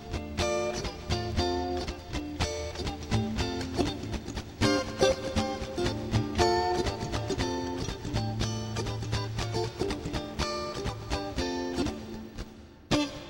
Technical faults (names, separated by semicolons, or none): none